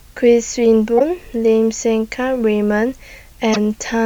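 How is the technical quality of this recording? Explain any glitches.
The speech carries a constant hiss throughout and has two brief glitches, near 0.96 s and 3.52 s.

Low bit depth with dither: the signal holds only about 9 bits, and dither added before rounding turns the error into steady white noise roughly 40 dB below the speech. It is an even hiss with no gritty distortion, which sets it apart from undithered truncation.

Damaged data in a compressed stream: from 0.96 to 1.01 s and again from 3.52 to 3.57 s, the decoder misreads corrupted frames and loses sync while searching for the next header. Each produces a short chirp, squawk, click or hole about 56 ms long.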